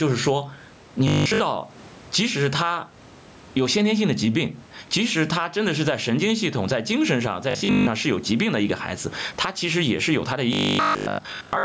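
Speech recorded through a call microphone chain, with two kinds of fault. Throughout, the input gain is likely set far too hot, so a fast limiter keeps clamping down on every loud syllable. That produces gain pumping: the level swings by roughly 15 dB, the room noise sits about 34 dB below the speech, and the dynamics come out flattened and squashed. At 1.08–1.40 s, 7.51–7.87 s and 10.53 s to the end, new audio is likely arriving too late, and the playback fills the gaps by looping the last short buffer while the real audio is skipped. The first stretch is made up entirely of repeats, and the later two mostly so. The result is robotic sound from repeated short buffers: a rigid, metallic 50 Hz buzz, which fits a 20 ms buffer, that only roughly tracks the speech. The band stops at 8 kHz, as expected from call processing.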